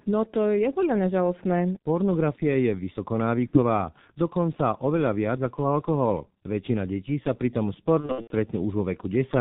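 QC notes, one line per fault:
throughout: G.723.1 codec, heavy damage. Nothing above 4 kHz, so the speech is muffled and hoarse with smeared consonants, consistent with a low-rate codec around 6.3 kbit/s.
3.47–3.59 s: VoIP packet loss concealed by the speech codec. About 60 ms is stretched into a buzzy tone or coloured noise that fades as the decoder extrapolates, consistent with two lost 30 ms frames, and it recovers just before "dokonca oveľa viac ako".
8.00–8.33 s: VoIP packet loss concealed by the speech codec. Just after "detí sa pri tom" there are scattered dropouts over 300 ms, with the longest gap about 90 ms, leaving weak, distorted patches while the decoder rebuilds.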